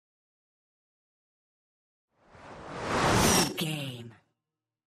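From 3.50 to 4.44 s, zipper noise appears as the level drops by roughly 15 dB in unsmoothed 3 dB steps, about seven a second. Each jump clicks, so a ticking rides on the sound.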